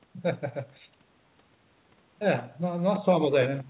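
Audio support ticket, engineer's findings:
No faults found in the speech audio; content stops at 4 kHz, as expected from the G.711 A-law call path.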